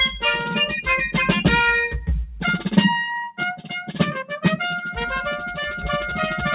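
At 3.57 s the noise suppressor misjudged part of the music as background noise and pulled its gain down until 3.72 s, so this sound was cut by the noise suppressor for roughly 150 ms. The level sinks by about 12 dB at its deepest, and sustained or decaying parts of the music briefly hollow out before recovering. Throughout, nothing reaches above 4 kHz, which fits a narrowband call codec such as G.711 mu-law.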